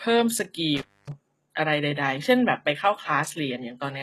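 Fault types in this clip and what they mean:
HE-AAC compression, throughout: The upper spectrum sounds synthesized rather than captured, with nothing above 12.3 kHz and plainly audible damage, likely from HE-AAC coding at a low rate that fits roughly 16 kbps. The coder keeps only the lower band and rebuilds the treble by copying lower bands upward under a coarse envelope, so the copied harmonics don't line up with the real ones. Sibilants come out gritty, metallic or lispy.
Intermittent contact, 0.77 to 1.12 s: A loose connection breaks the signal path, and the sound drops out for about 0.26 s within that span. Crackle marks the edges where the contact opens and closes. While the line is open, only faint hiss remains in place of the signal, then the sound returns abruptly once the connection is restored.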